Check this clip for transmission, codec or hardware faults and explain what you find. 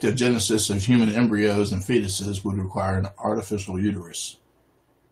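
I find no faults to explain in this clip.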